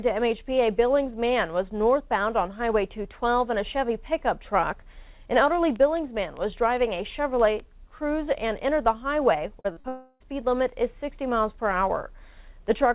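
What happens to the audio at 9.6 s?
A short concealed packet loss occurs from 9.60 to 9.67 s. About 40 ms of audio arrived too late to decode, so the receiver extended the preceding sound for roughly 43 ms before blending back into the real signal. The result is a brief smear or wobble.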